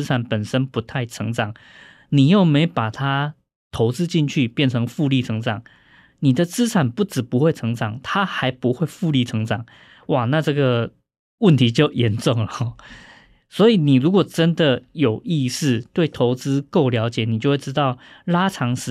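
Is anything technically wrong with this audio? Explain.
Yes. At 12.52 s a brief burble of noise cuts across the speech. This is DAB burbling: weak reception let bit errors slip past error correction into the MP2 data, so corrupted audio data put short blips of noise into individual sub-bands. The error rate was low, roughly one bit in a thousand.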